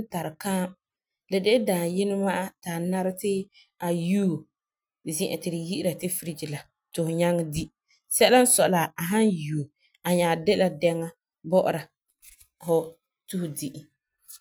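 No technical faults can be heard anywhere in the recording, and the signal stays continuous and intact throughout.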